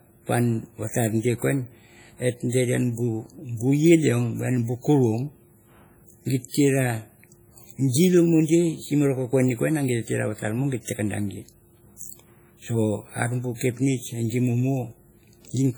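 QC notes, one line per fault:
throughout, WMA compression: Speech sounds heavily ringing and washy, with hiss that breathes along with it. Likely a transform codec starved of bits, consistent with roughly 32 kbps.
6.49–6.54 s and 7.89–7.94 s, pre-echo: A short hiss, about 55 ms, leads each sharp attack and softens it. Quantisation noise sized for the loud onset spreads into the quiet moment before it.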